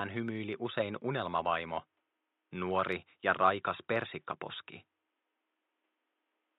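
No technical faults are audible.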